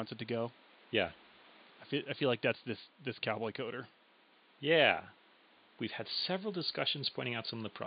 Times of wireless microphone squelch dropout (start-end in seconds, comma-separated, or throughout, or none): none